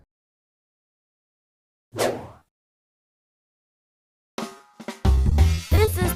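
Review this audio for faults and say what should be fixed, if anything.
Repeated packet loss (robotic sound), 2.39–4.75 s and 5.15–5.93 s: packets kept dropping, concealment stretched the last sound, leaving choppy stutter with gaps up to 80 ms. Prevent it with a steadier network path and a larger jitter buffer.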